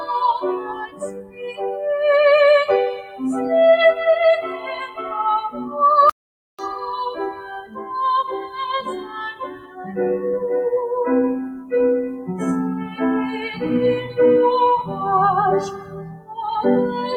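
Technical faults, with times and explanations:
Throughout: noise suppressor applied to music or sounds. A speech-tuned suppressor is treating steady, held parts of the sound as noise and pulling them down, so the level swings by around 10 dB. Attacks get through while sustains and tails sink, which gives a pumping, thinned-out feel.
0.56–1.84 s, 2.90–3.21 s, 4.42–5.11 s, 5.51–5.74 s, 7.32–7.91 s, 8.36–9.94 s, 15.71–16.37 s: sound cut by the noise suppressor. In each of these stretches, sustained or decaying sound gets clamped harder than the rest, dipping as much as about 16 dB at 0.56–1.84 s and 15.71–16.37 s. Tails get chopped short.
6.10–6.59 s: audio dropout to silence. For about half a second the sound stops dead into silence, with no room tone at all, then resumes mid-flow. That points to the input likely being lost or briefly muted while recording carried on writing silence.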